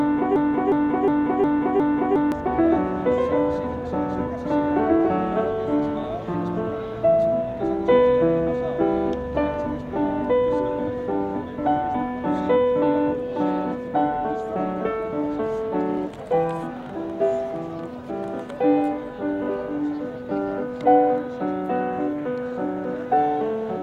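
The audio opens mid-fault with a broken-record loop: a fragment of about 360 ms repeats exactly, five times back to back, from 0.00 to 2.32 s, and whatever should have played there is lost. A stalled player or stream is the likely cause. Unlike an echo, each repeat is identical and doesn't decay.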